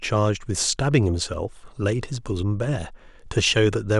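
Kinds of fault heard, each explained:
Dropped samples: the stream likely skipped a tiny run of samples, a fraction of a millisecond's worth, so the waveform leaps straight to a later value. At 1.34 s this jump is heard as one sharp, isolated click in the speech, with nothing audibly missing.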